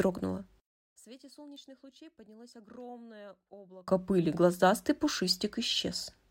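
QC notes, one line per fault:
0.67–3.88 s, one channel inverted: the speech suddenly sinks by about 28 dB and turns faint, then comes back to full level just before "пыли глазастый". What you hear is a centred voice cancelling itself out. The likely cause is one stereo channel flipped in polarity for that stretch, so summing to mono wipes out everything the two sides share and leaves only the small leftover difference between them.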